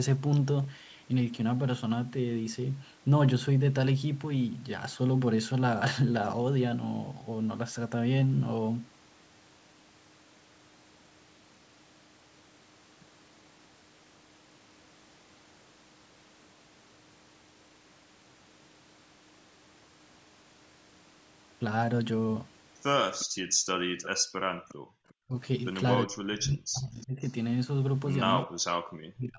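At 23.19 s a faint copy of the speech returns 357 ms late, likely an echo leak: the far end's echo canceller let loudspeaker sound back into its microphone. From 23.26 to 24.99 s the canceller's gating clamps the microphone while its loudspeaker plays, so the room background dips by up to about 40 dB, for roughly a second in all, before recovering. The same 357 ms echo leak recurs at 24.02 s and from 24.68 to 25.14 s. It is well below the speech, at roughly 15 to 25 dB down.

At 25.27 s the speech briefly dips by roughly 25 dB. This is likely speech suppressed in double talk: with both sides talking, the canceller treated the talker as echo and turned the talker down. The speech drops out more deeply, by up to roughly 40 dB, between 26.06 and 27.22 s and again from 28.43 s to the end.

A last, very faint echo-leak tail at the same 357 ms delay runs from 27.01 to 27.32 s, roughly 30 dB below the speech. 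Throughout, the call's microphone path passes nothing above 8 kHz.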